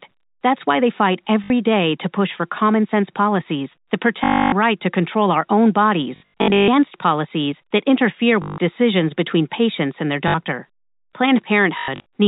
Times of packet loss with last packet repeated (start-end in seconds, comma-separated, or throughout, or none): 1.44-1.50, 4.24-4.52, 6.16-6.68, 8.42-8.58, 10.28-10.34, 11.78-12.04